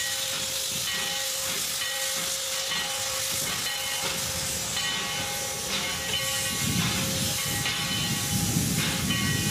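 From the start to 4.38 s there is a time-stretched section running at 1.53 times normal pace with unchanged pitch. It is likely that software shortened the passage by dropping short fragments, which leaves it rushed until normal pace abruptly returns.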